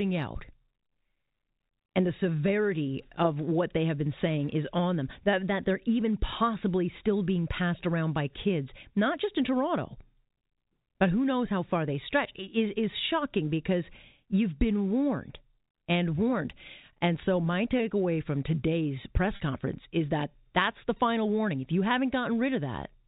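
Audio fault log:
19.36 to 19.40 s, packet loss with pitch repetition: the speech briefly sounds held and slightly buzzy, as if one instant of the voice is stretched. About 40 ms of audio went missing, which fits two lost 20 ms packets. The receiver filled the gap by repeating the last pitch period, so the same cycle loops for a moment before the real signal resumes. The telephone band of the G.711 coding stays audible through the patch.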